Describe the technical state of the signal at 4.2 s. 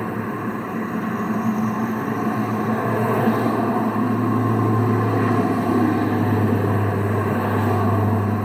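At 4.2 s the signal is intact, with no dropout, distortion, glitch or other technical fault audible at that point in the sound.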